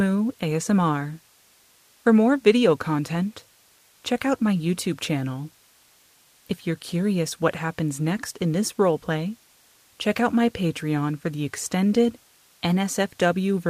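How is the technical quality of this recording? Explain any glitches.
Listening closely, nothing in the recording stood out as a technical problem or glitch.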